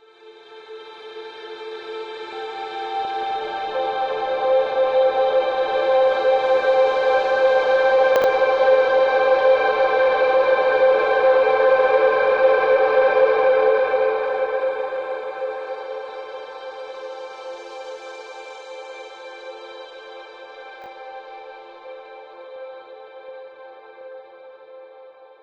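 A recording of sounds in which 20 ms chunks were delivered late and played after the chunks meant to follow them, so they are heard as chunks out of order. From 8.16 to 8.24 s one chunk lands three places late, and at 20.82 to 20.86 s one lands a single place late, each giving a brief jumbled stutter.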